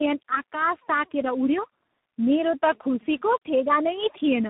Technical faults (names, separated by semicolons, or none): tandem speech coding